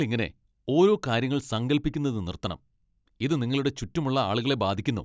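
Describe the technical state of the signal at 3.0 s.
At 3.0 s the speech signal is intact, with no audible technical fault at that moment.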